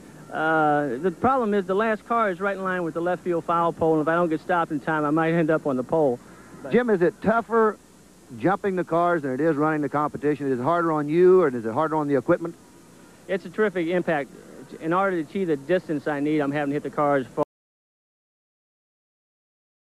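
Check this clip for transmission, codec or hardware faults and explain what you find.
One fault is present: an audio dropout to silence. At 17.43 s the sound cuts off abruptly, mid-flow, and does not return. The gap runs to the end of the clip, about 2.4 s. It is silence, with no room tone or noise floor underneath. The input was likely lost upstream, through a disconnected device, a failed link or a mute, while the recorder kept writing silence. Whatever happened in that stretch is gone.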